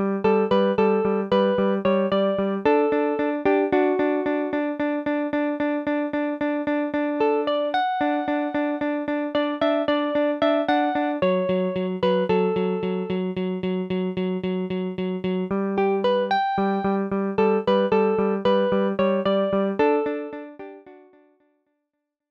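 Nothing stood out on listening, and the gentle fade-out over the last couple of seconds eases the sound away without a click or hard edge.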